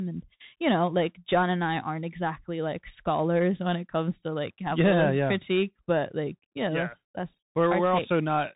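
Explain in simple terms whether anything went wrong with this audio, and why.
A Bluetooth CVSD headset codec runs through the whole recording, from start to finish, and its damage is plainly audible. This is the basic phone-quality link used by wireless headsets. Instead of sending the full sound, it sends a rapid stream of tiny up-or-down steps, so nothing above 3.8 kHz survives, making the speech sound muffled and boxy. Sharp s sounds come out scratchy, louder bright moments break up, and a grainy hiss sits underneath.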